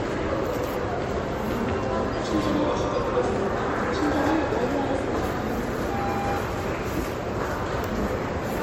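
A recording of everyday sounds that swirls and smears throughout, with hollow-sounding gaps in the spectrum, blurred attacks and nothing above 16.5 kHz. The likely cause is generation loss: around four successive MP3 encodes at 64 kbit/s.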